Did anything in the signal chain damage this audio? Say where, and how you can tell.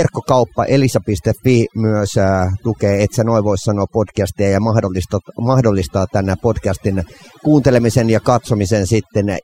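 Yes. Overdone noise removal, at the call-processing stage, affects the whole speech clip. The suppressor was set too aggressively: bands near its noise estimate are driven almost to zero, so pauses fall to near silence with twinkling specks, and quiet speech components vanish.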